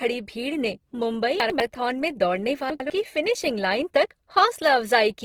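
Throughout the speech, the audio has likely passed through Opus compression in its music (CELT) mode at a starved rate, which fits around 16 kbps. Short of bits, the encoder fills bands with folded or noise content, so the voice sounds plainly grainy and rough, though bandwidth stays full, reaching about 20.2 kHz.

From 1.4 to 1.6 s, chunks play out of order: one 100 ms chunk arrives a chunk late and plays after the segment that should follow it. Nothing is lost, but the sequence is scrambled, giving a jumbled moment with three hard joins.

The same chunks-out-of-order fault recurs from 2.7 to 2.9 s. Again a 100 ms chunk lands one position late and swaps places with its neighbour, so the sound briefly garbles where the misplaced pieces butt together.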